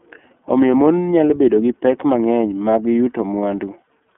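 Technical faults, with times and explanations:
Throughout, iLBC codec: the spectrogram is empty above 3.8 kHz, and independently coded 30 ms frames leave the speech audibly rough and synthetic.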